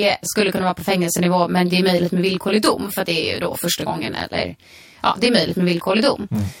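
Speech, with channel delay (comb filtering) throughout. One channel arrives roughly 20 ms behind the other, and when the two are summed to mono the shared content cancels at evenly spaced frequencies. The first notch sits very low, around 20 Hz, and the rest follow at close, regular intervals across the band. This dense fixed comb makes the speech sound rough and slightly doubled, a quality that does not change over the clip.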